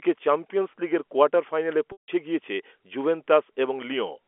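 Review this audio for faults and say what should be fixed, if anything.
Packet loss with pitch repetition, 1.92 to 2.08 s: a 160 ms gap where a repeated pitch period fades to silence, then speech cross-fades back in. To prevent it, add forward error correction or redundant packets on the link, and fix the network path that is dropping them.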